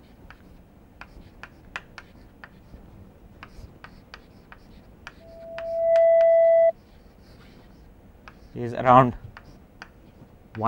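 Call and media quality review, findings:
Loudspeaker feedback squeal, 5.20 s to 6.73 s. Single tone at 663 Hz swelling over roughly 0.7 s to around 15 dB above the programme sound, then cut off at 6.73 s. Probable component: open mic coupled to a nearby loudspeaker. Mechanism: acoustic loop gain above unity at 663 Hz, so that frequency regenerates each pass until the loop breaks. Check mic/speaker placement, echo suppression and gain staging on the capture side.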